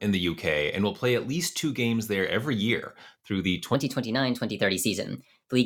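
Right after "every year through the", at about 3.75 s, the rest of the speech to the end at 5.65 s plays back as a section at the wrong speed. It runs around 1.19 times too fast, so the voice jumps up roughly three semitones and sounds hurried and a bit chipmunky. Pitch and tempo shift together at that exact point, which most likely means that stretch was rendered or resampled against the wrong clock.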